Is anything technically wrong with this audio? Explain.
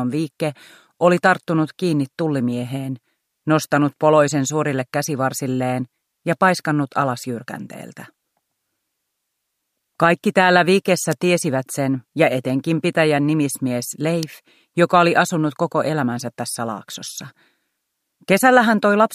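Yes. Sharp snaps sit on top of the sound at 11.12 s and 14.23 s, the second louder, peaking around -5 dBFS. These are electrical switching spikes, likely a nearby switch, motor or static discharge arcing briefly, with the line picking up each burst.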